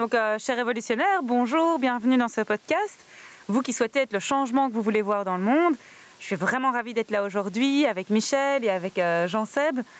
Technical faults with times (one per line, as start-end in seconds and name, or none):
0.00-9.99 gain pumping